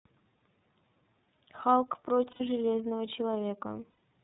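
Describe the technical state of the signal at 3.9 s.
The sound turns into a held, slightly buzzy, breathy vowel from 3.90 to 3.99 s, with about 90 ms missing across a 150 ms stretch and the longest gap around a tenth of a second. This is lost iLBC frames: the decoder repeated the last pitch cycle mixed with noise, which fits three lost 30 ms frames, and it recovers almost at once because each frame decodes independently. Under it runs the iLBC codec's rough, synthetic narrowband character with nothing above 4 kHz, consistent with its 13.33 kbps mode.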